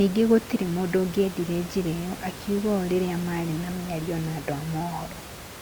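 Nothing goes wrong technically anywhere in this speech, and the only other thing you can hear is a bit of room noise sitting about 14 dB below the talking, which just comes with the space the microphone was in.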